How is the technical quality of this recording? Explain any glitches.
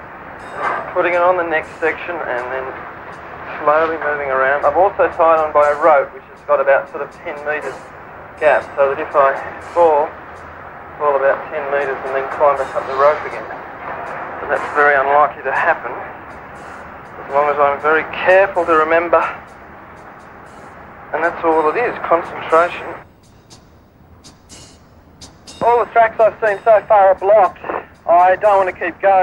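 Listening closely, nothing in the recording stood out as a technical problem.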